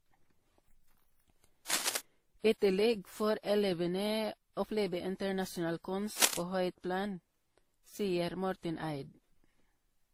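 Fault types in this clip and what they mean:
Transcoding between lossy codecs: The speech was likely encoded with one lossy codec and then re-encoded with others, with each stage spending bits on the previous stage's damage and adding its own. The mixed artefacts are consistent with a low-rate MP3 pass, a low-rate Opus pass and a final WMA pass. They are layered together throughout the clip. The band still reaches 20 kHz, so the harm is smeared, coarse detail rather than lost top end.
Cable scratch noise: A worn cable, connector or control was likely moved, making its contact resistance jump about rapidly and inject dense, irregular noise bursts into the signal path. In the speech this is heard as a brief scratching, rustling layer at about the same loudness as the speech itself. It occurs twice: from 1.68 to 1.97 s and from 6.17 to 6.37 s, each lasting roughly a fifth to a third of a second.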